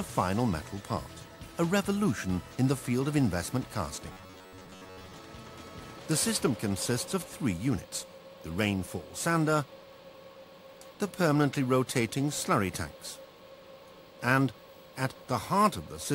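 From 4.12 to 5.14 s, a rigid 93.8 Hz metallic buzz: robotic sound, likely from a repeated buffer of about 11 ms replacing most audio.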